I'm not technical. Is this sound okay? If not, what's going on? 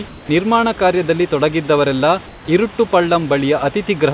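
No, not entirely. Twice, from 0.08 to 0.29 s and from 2.27 to 2.48 s, the call system likely stopped sending sound during a pause and had the receiving end fill the gap with made-up hiss. This is comfort noise in place of the background. For about a fifth of a second each time, the real room sound is replaced by a flat, featureless hiss that is slightly quieter, most noticeably the second time.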